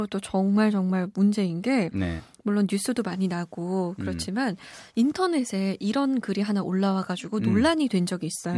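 No technical faults can be heard anywhere in this speech recording. Nothing interrupts, distorts or drops out of the audio at any point.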